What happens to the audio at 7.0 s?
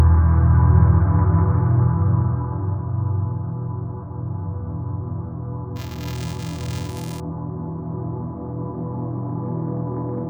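At 7.0 s the sound is inside a stretch of buffer tearing running from 5.76 to 7.20 s. Writer and reader have slipped, so each 128-sample buffer carries a small slice of audio from one lap earlier, about 10 ms old. The hard joins give a steady 375 Hz robotic buzz that appears only with signal, unlike random crackle.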